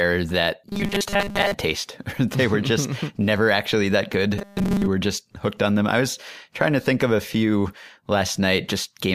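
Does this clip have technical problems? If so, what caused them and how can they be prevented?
Yes. Robotic sound from repeated short buffers appears from 0.69 to 1.54 s and again from 4.38 to 4.87 s, between "never actually that" and "were just hooked on". The speech becomes a rigid metallic buzz at 200 Hz, likely because audio arrived too slowly and a 5 ms slice was looped in its place, covering most of the real signal. A spectrogram shows evenly spaced 200 Hz harmonic stripes; the waveform shows identical repeating cycles. Larger jitter buffers and steadier delivery prevent it.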